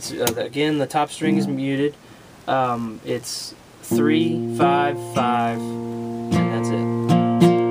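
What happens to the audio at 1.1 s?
At 1.1 s, computer activity noise is present, as it is throughout: load-driven ground fluctuations add a buzzing chirp pulsing near 70 Hz, roughly 35 dB below the signal.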